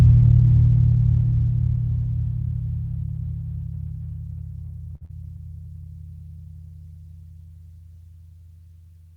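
A music clip with two network faults close together. At 4.95 to 5.03 s there is a short stall from a late packet. The sound is held for about 57 ms, then resumes where it left off, with nothing lost. At 5.05 to 5.11 s comes a short concealed packet loss. About 40 ms of audio never arrived, and the receiver covered the gap by extending the preceding sound, leaving a brief smear before the music rejoins.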